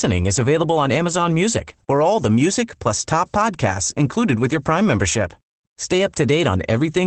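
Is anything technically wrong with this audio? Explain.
Yes. Throughout the speech, the sound is muffled and slightly hoarse, with a faintly robotic, buzzy edge and no crisp top end. This is Opus voice compression running in its SILK linear-prediction mode at a low rate, which fits a bitrate of around 12 kbps. The band is trimmed to wideband, so nothing above 8 kHz survives, and the excitation driving the predictor is coded coarsely, leaving plainly audible roughness on every stretch of speech.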